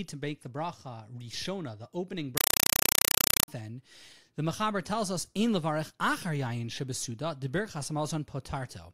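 Compressed stream played as audio from 2.37 to 3.48 s: an encoded bitstream, consistent with 192 kbps Dolby Digital, is treated as plain samples instead of being decoded. Each frame becomes a 4 ms noise burst then silence, repeating 31.25 times a second, heard as loud chattering static replacing the speech.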